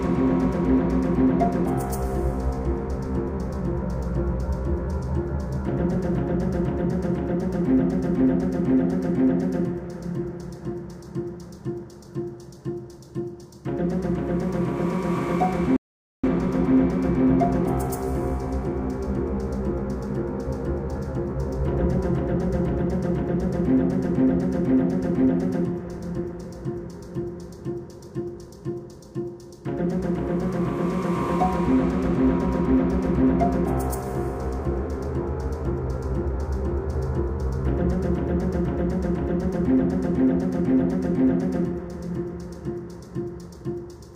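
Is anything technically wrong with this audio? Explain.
Yes, there's a digital broadcast dropout from 15.76 to 16.28 s. The receiver stopped getting good frames and muted, fading out in about 3 ms. Roughly half a second of audio goes missing, which suggests around a dozen lost frames, before the sound snaps back.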